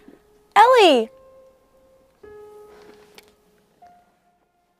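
No technical faults can be heard in this audio; the level is smoothly turned down or back up at points, as with a fader, and the signal runs without interruption.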